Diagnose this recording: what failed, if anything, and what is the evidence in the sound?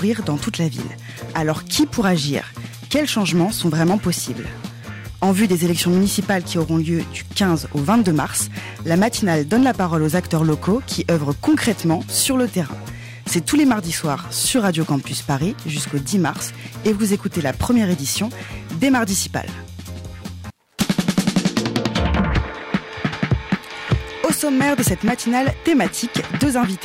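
Hard clipping runs throughout the recording. The signal was driven about 5 dB past what the converter or a gain stage ahead of it could pass, so a small fraction of the peaks are cut flat. Those flattened tops add high harmonics, heard as crackle on the loudest moments.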